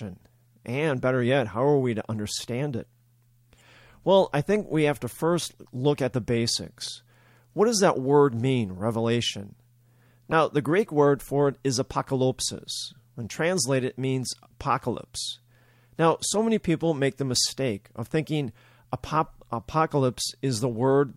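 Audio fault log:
3.57–3.61 s, 10.31 s, 17.34 s: corrupt frame decoded. In each case the decoder played a damaged compressed frame, or a few in a row, as though it were valid, so misread gains and codes put energy in the wrong frequency regions. The result is a brief chirp or blip, peaking around -20, -15 and -25 dBFS respectively. On a spectrogram each one shows as a short vertical smear or patch at the wrong frequencies. On the waveform it is a short disturbance lasting about the length of the damaged frames.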